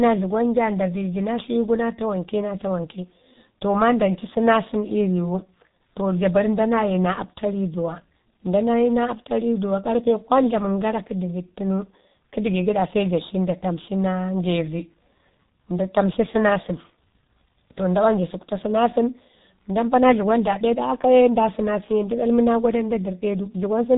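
Speech running through a G.723.1 codec from start to finish, heavily damaged: nothing passes above 3.8 kHz, and the voice sounds muffled and hoarse with smeared consonants, pointing to a rate near 6 kbit/s. Unlike a simple low-pass filter, the coarse, slowly updated vocal model roughens the voice itself.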